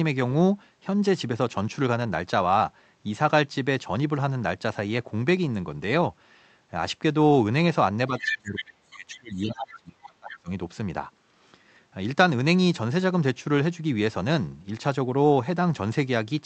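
From 8.08 to 10.5 s, speech suppressed in double talk: the talker's level drops by up to roughly 30 dB over about two seconds, likely because the echo canceller could not separate near speech from loudspeaker echo. Within that span, the other side's voice leaks through at 8.18–8.38 s, 8.56–8.64 s and 10.3–10.36 s, fading from a few dB to well below the speech, likely residual echo the canceller missed.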